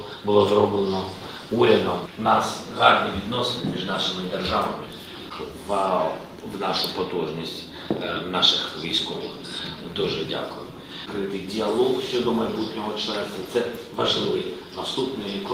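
Nothing here stands out as a technical problem: the sound runs along steadily the whole way, with no glitches, gaps or dropouts to point to.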